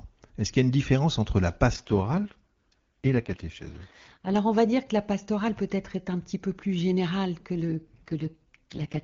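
AMR rate drops at 1.73–4.36 s and from 7.70 s to the end: the codec falls back to its lowest rates, fitting 23.85 to 6.6 kbit/s, and the speech turns raspy and synthetic with no gap or narrowing.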